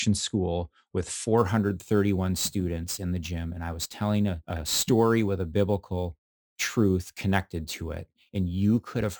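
Speech clip with imaging from sample-and-hold upsampling running from 1.38 s to the end at 9.20 s. Above 12 kHz a bright, metallic fizz sits about 21 dB below the speech, filling the band up to 24 kHz and rising and falling with the speech level. It is a mirrored copy of the speech spectrum, so its pitch movement runs opposite to the speech. This fits audio at 24 kHz converted to 44.1 kHz by holding each sample with no smoothing filter to remove the spectral copies.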